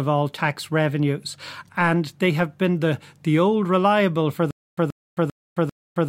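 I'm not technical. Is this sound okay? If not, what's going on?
No. From 4.51 s, right after "the old reliable for", a stutter with silent gaps starts: the same 0.13 s snippet repeats four times, each followed by 0.27 s of silence, until the end. The likely cause is the playback stalling. Unlike a simple dropout, the same bit keeps coming back.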